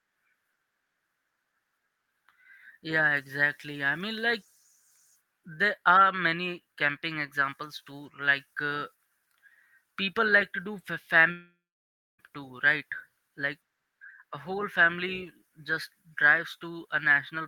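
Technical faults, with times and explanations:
11.31 to 12.21 s, long network dropout: the speech cuts out for just under a second, and about 880 ms of it is simply gone. At the break, the last sound gets smeared on as a fading buzz, then roughly 630 ms of plain silence follows before the speech resumes further along, skipping the lost stretch. That pattern most likely comes from packets failing to arrive, with the receiver stretching what it had until it gave up.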